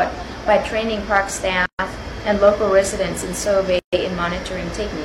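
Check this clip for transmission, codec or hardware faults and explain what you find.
There are two gaps at joins of encoded pieces, from 1.66 to 1.79 s and from 3.79 to 3.93 s, spaced 2.0 s apart. The audio was encoded in separate pieces and joined untrimmed, so each encoder's start delay and end padding remain. Continuous sound drops out for about 133 and 136 ms, with smeared edges, then resumes where it stopped.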